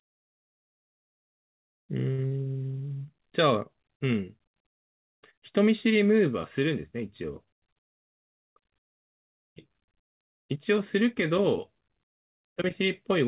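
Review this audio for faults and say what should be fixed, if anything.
A short stall from a late packet occurs at 2.12 to 2.21 s. A packet arrived late and the jitter buffer ran dry. The receiver held the last sound for about 60 ms, then resumed where it left off. Nothing is lost, but the sound drags briefly. A slightly deeper jitter buffer target would absorb this lateness.

Short concealed packet loss follows at 2.27 to 2.33 s. About 40 ms of audio never arrived. The decoder extended the preceding sound to bridge the gap, then faded back in. It is heard as a brief smear. Forward error correction or redundant packets would prevent this.

A jitter buffer speed-up runs from 7.44 to 8.51 s. The buffer had built up excess delay. The receiver trimmed small pitch-period slices repeatedly, roughly 70 ms in total. Playback runs at 106% speed with the pitch unchanged, so this stretch sounds slightly rushed. 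Steadier packet delivery would avoid the backlog.

The audio has no content above 4 kHz, which fits G.711 mu-law at 64 kbps.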